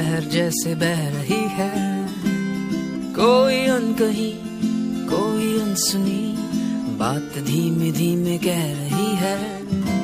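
No technical faults can be heard in this recording.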